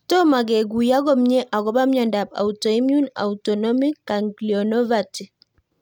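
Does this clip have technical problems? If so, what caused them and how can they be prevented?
No, no technical faults detected.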